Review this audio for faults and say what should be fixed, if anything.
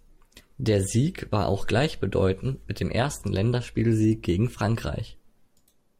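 A steady low tone sits under the speech from 0.70 s to 5.15 s, at roughly 25 dB below the speech level. It is mains hum at 50 Hz, where power-line current has leaked into the signal path, typically through a ground loop between connected devices or magnetic pickup from a nearby transformer. To prevent it, power all connected gear from a single grounded outlet, use balanced cables, and keep leads away from transformers and power supplies.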